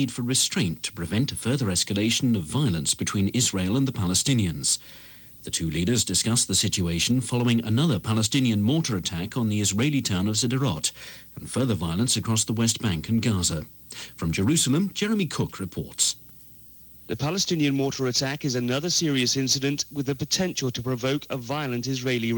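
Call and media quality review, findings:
No audible fault found across the clip; nothing to attribute to capture, transport or playback.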